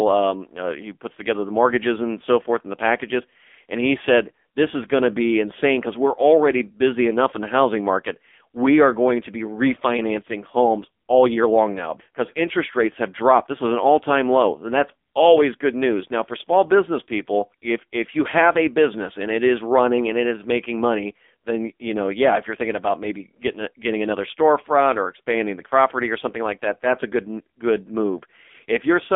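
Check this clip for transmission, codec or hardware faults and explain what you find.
One codec fault runs through the whole recording. AMR narrowband mobile codec, throughout: pulse-driven vocal-tract coding squeezes speech into about 250 Hz to 3.5 kHz, and heavy damage makes it buzzy and synthetic, which fits roughly 6.7 kbps.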